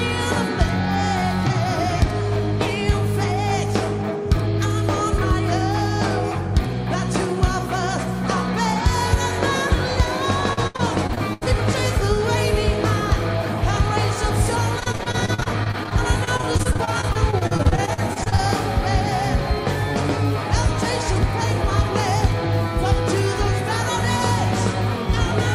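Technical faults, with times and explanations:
10.53 to 11.54 s and 14.80 to 18.40 s, repeated packet loss (robotic sound): packets went missing again and again. Each hole was patched by stretching the last sound. Seven gaps up to 79 ms hit the first stretch, then many gaps up to 40 ms. About a quarter of each stretch is filler, so it sounds choppy.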